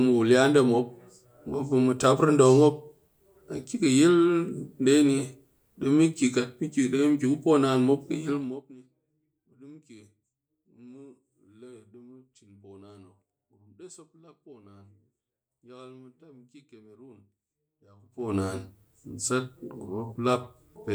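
At 8.27 s, just after "poo naan mop kɨ", zipper noise appears as the speech drops by roughly 25 dB over about half a second, ending at 8.74 s. The gain falls in 1 dB steps, around 50 per second, each step leaving a small click, so a fast ticking rides on the fade. At 17.97 s, after "mɨ ki kemerong diya", the level climbs back the same way, at around 70 steps per second, until 18.35 s.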